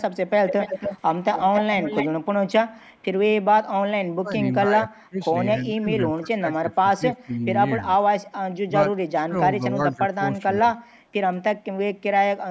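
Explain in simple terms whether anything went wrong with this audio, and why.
Two problems can be heard in this speech.

The first is an echo leak. At 0.46 to 0.98 s and 1.32 to 2.08 s, a copy of the voice returns 277 ms late, nearly as loud as the original. At 2.94 to 3.05 s a faint scrap returns. The likely cause is that a loudspeaker's sound reached the microphone and was not cancelled.

The second is speech suppressed in double talk. The voice dips or partly cuts out at 4.18 to 5.21 s, 5.57 to 7.44 s, 7.98 to 8.05 s, 8.67 to 8.71 s and 9.14 to 10.78 s. The first dip is deepest. Both sides were likely talking at once, so the echo control turned the voice down.

The call's microphone processing, which leaves nothing above 8 kHz, works as expected.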